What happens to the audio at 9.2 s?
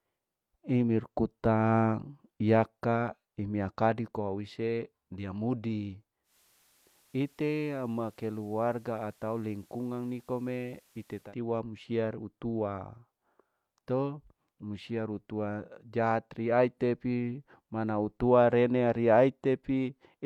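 At 9.2 s the speech is in the middle of a digital radio blend to analogue, running from 6.23 s to 11.35 s. The receiver lost its digital stream and cross-faded over about 151 ms to the station's FM broadcast. The level drops by about 4 dB and steady hiss sits roughly 35 dB below the signal. A waveform shows a slightly lower envelope across that span, and a spectrogram shows a raised broadband noise floor filling the gaps between syllables.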